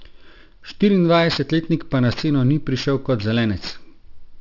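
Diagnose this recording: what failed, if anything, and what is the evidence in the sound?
Aliasing at the sample-rate conversion stage. Sibilants sound gritty and metallic throughout, folding about 6 kHz, which fits an unfiltered drop to 12 kHz. Aliases sit roughly 15 dB below the speech.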